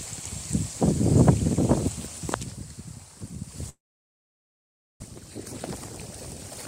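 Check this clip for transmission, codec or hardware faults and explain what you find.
One fault is present. From 3.69 s to 5.04 s there is a long network dropout. The last sound smears into a fading buzz, then near silence for 1.23 s. Audio returns with 1.0 s missing, likely because packets stopped arriving.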